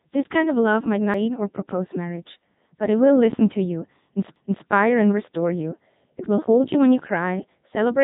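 Speech passed through the Codec 2 vocoder, with two CD skips on top. The whole clip has the buzzy, robotic tone of sine-wave resynthesis. The decoder rebuilds the voice only from pitch, voicing, energy and a coarse spectral envelope, so the original waveform is gone. Nothing is heard above about 3.9 kHz, and the heavy damage fits Codec 2's 3.2 kbit/s mode. A smeary low-bitrate codec would still approximate the waveform. Here the voice sounds synthetic and mechanically voiced. The first CD skip comes at 1.14 s, after "kind of love might" and before "or propose marriage but". The second comes at 4.36 s, between "to you" and "and restore you". Each one is a tick with a mute of just a few milliseconds, after which playback carries on from a different point in the recording. That jump in position is what sets it apart from a simple dropout, which would leave a gap and then resume from the same place.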